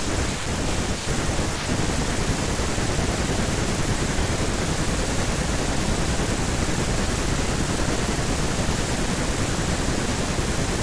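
Nothing goes wrong anywhere in this bit of speech, so there's no technical fault to point to at any moment.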